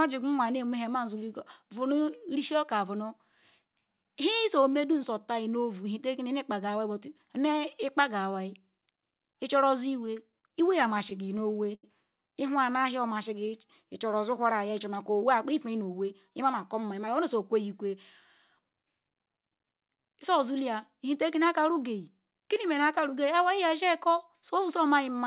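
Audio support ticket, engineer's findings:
Repeated stalls (stutter), 10.06–11.85 s: 13 short hangs, longest 83 ms, about 210 ms filled in total (roughly 12% of that stretch). Jitter buffer kept running dry on late packets, receiver stretched the last sound each time. Nothing actually lost, just draggy.

Jitter buffer slow-down, 12.70–13.48 s: speech runs at 93% speed, same pitch, sounds drawn out. Buffer building reserve by repeating single pitch periods, about 61 ms added across that bit.

Jitter buffer speed-up, 15.43–17.22 s: speech at 107%, pitch unchanged, a bit rushed. Buffer overfull, so it trimmed pitch periods to shed delay, around 150 ms cut. Band stops at 4 kHz throughout, which fits G.711 mu-law at 64 kbps on the call path.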